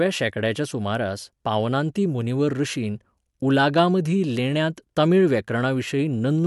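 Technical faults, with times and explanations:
No technical faults are present; the speech signal holds steady from beginning to end with no dropouts, interruptions or level disturbances.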